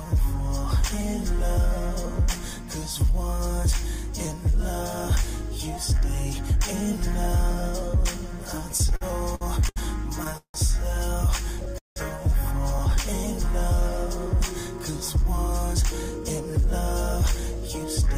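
Right through the clip there's light hard clipping. The level runs about 2 dB past what a stage can pass, so a small fraction of peaks get flattened into brief crackle. From 8.69 to 10.56 s you get repeated stalls (stutter). The jitter buffer ran dry eight times, and about 388 ms of stretched-out continuation was filled in, the longest hold being 169 ms. Nothing's lost, but it drags and hiccups. At 11.78 to 11.98 s the audio hangs for 180 ms, fading to about 150 ms of silence before resuming where it stopped. That's likely a call audio freeze from held-up packets. Finally, from 15.16 to 18.06 s there's a jitter buffer speed-up. Tiny pitch-period slices totalling about 50 ms get trimmed, so the sound runs at 102% speed with pitch unchanged.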